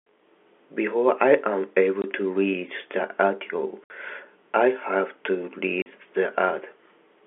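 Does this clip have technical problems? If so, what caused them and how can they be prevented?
Yes. The speech has packet loss filled with silence at 2.02 to 2.04 s (20 ms), 3.84 to 3.90 s (60 ms) and 5.82 to 5.86 s (40 ms). The gaps are whole multiples of 20 ms, which fits 20 ms packets, with the receiver inserting digital silence. A waveform drops abruptly to a flat line, and a spectrogram shows blank vertical slots. Packet loss concealment, forward error correction or a deeper jitter buffer would prevent these holes.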